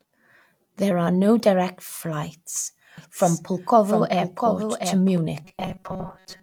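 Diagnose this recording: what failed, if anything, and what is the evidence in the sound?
Doubled audio track from 2.98 to 5.18 s, after "are no direct flights": a full-band copy about 5 dB quieter trails by roughly 0.7 s, which is likely a second capture path. On a spectrogram, a shifted duplicate of every pattern starts and stops abruptly.

Robotic sound from repeated short buffers at 5.45 s to the end: the driver is likely starved, so it loops about 5.3 ms chunks. This produces a rigid 188 Hz buzz, which shows up as evenly spaced harmonics and a repeating waveform.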